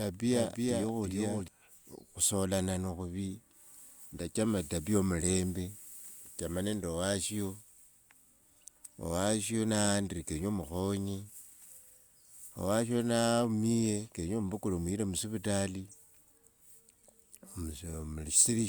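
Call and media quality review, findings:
Doubled audio track, 0 to 1.48 s, already present at clip start: likely a second capture path running late, mixing a full-band copy of the speech roughly 0.4 s behind and about 5 dB down. Dry, no room tail; copy cuts off abruptly at 1.48 s.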